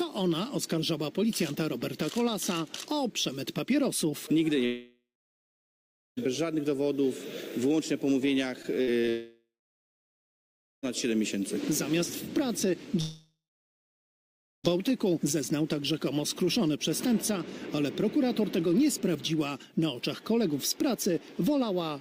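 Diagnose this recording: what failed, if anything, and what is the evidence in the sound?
The network path failed. The stream most likely stopped arriving in three long dropouts, at 4.65 to 6.19 s, 9.09 to 10.85 s and 13.01 to 14.70 s. Each time, the receiver extended the last sound into a fading buzz for a few tenths of a second, then left silence for roughly 1.1 s, 1.3 s and 1.25 s. When the audio resumes, about 1.5 to 1.7 s of material is simply gone.

Just before the second dropout, from 8.63 to 9.09 s, packets were lost or late repeatedly. The sound points to four short holes, the longest about 62 ms, each patched by stretching the preceding audio. About a quarter of that half-second is concealment, roughly 120 ms in all, giving a choppy texture with pieces missing. This repeated packet loss leads directly into the full dropout at 9.09 s.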